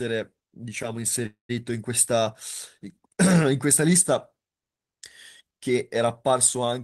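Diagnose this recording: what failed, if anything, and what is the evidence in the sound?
A call audio freeze hits at 1.26 s and runs to 1.51 s. The last bit of speech gets stretched into a fading buzz, then drops to near-silence for about 130 ms before things pick up again. Nothing seems lost; the speech just resumes late, roughly 230 ms behind where it was. That points to the network stage: packets likely stalled in transit, the jitter buffer drained, and the receiver padded the wait with concealment.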